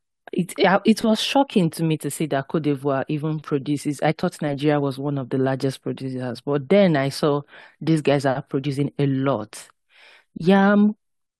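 Two stream segments overlap in their time stamps at the join near 4.23 s in this speech recording, where the 6-second segments meet. The player trims about 16 ms of sound that was never actually duplicated, so the waveform jumps and a brief click or skip is heard.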